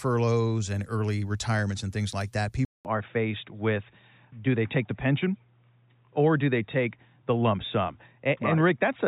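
Speech clip. At 2.65 s the audio drops out for 200 ms. From there to the end, nothing passes above 3.8 kHz, so the speech turns duller. New background noise sits roughly 50 dB below it. Loudness barely changes. Likely an input switched to a poorer device.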